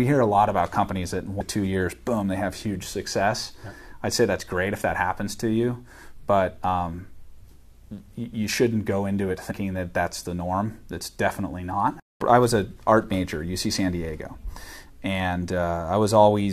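Jumps at 1.40 s and 9.50–9.52 s, where the audio lurches ahead by roughly 150 ms and 70 ms: compressed frames skipped, fitting about seven and three 23.2 ms frames lost.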